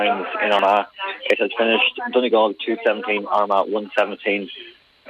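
Damaged data in a compressed stream appears at 0.59 s as a very brief blip. Corrupted bytes leave the decoder unable to read the frame there, so it loses sync and searches for the next valid frame header, producing the short glitch.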